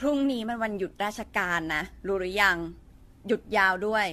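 Throughout, the speech carries generation loss: a swirly, hollow smear with blurred consonant attacks, likely from around seven successive encodes that point to AAC at about 64 kbit/s. A spectrogram shows nothing above 14 kHz.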